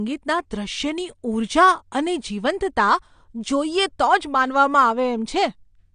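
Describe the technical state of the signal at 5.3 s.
AAC compression, present at 5.3 s and throughout the clip: the speech is dull and smeared, with nothing above 9.8 kHz and a warbly, fizzy edge on sibilants. The likely cause is an AAC-LC encoder at a low bitrate, around 32 kbps, discarding high bands and coarsely quantising the rest.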